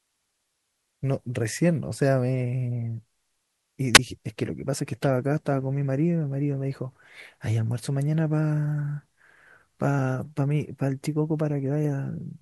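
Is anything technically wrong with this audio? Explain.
Yes. At 3.94 to 3.99 s the speech briefly swells into hiss, drops to near silence for about 13 ms, then returns. This is a wireless microphone squelch dropout: the FM radio signal faded until the receiver's squelch muted its output.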